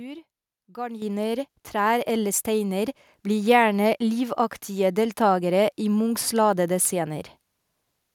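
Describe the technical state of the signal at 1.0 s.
At 1.02 s the microphone volume steps up. The input gain on the capture device was raised in a single jump of about 9 dB. The speech and the background noise get louder together at that instant, with no gradual ramp.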